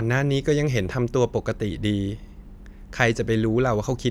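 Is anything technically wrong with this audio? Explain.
No, nothing technically wrong turns up anywhere in this speech recording.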